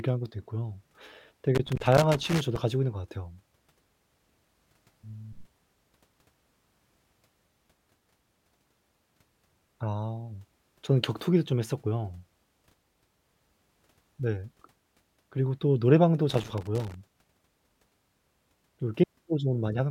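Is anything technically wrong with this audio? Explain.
Yes. A loose connector crackle occurs from 1.55 to 2.56 s and again from 16.29 to 16.94 s: a worn or dirty contact keeps making and breaking as it shifts, chopping the speech signal, heard as irregular bursts of scratchy crackle.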